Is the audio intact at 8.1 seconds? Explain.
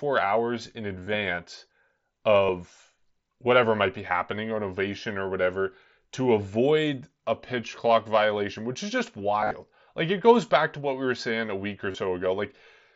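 Yes, the audio is intact at 8.1 seconds, with no dropout, glitch or other fault at that moment.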